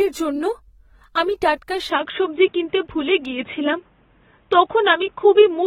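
From the start, the speech carries plainly audible codec damage. Nothing is present above 16.6 kHz. This is likely AAC compression, AAC-LC at a rate that fits about 24 kbps. The codec splits each frame into frequency lines and spends too few bits on them. It lowers the cut-off and coarsens what remains. The result is a dull, smeared sound, with a warbling, fizzy texture on sustained sounds and sibilants.

At 1.90 s, just after "আমি টাটকা", the sound changes abruptly and stays changed to the end. There is no gap at the switch. The band now stops at 3.8 kHz, so the speech turns dull and boxy. The level shifts by about 5 dB. A new background noise appears, roughly 40 dB below the speech. The likely cause is an input switched to a poorer device mid-recording, with its own narrower band, tone and noise.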